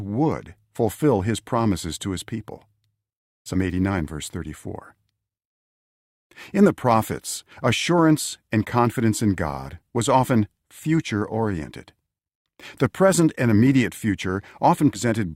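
At 3.53 to 3.56 s the audio jumps forward. This is compressed frames skipped. A few whole frames never reach the output, so roughly 70 ms of sound is lost. The jump fits a 20 ms frame length. It happens again at 14.93 to 14.99 s, with a handful of frames and about the same amount of audio gone.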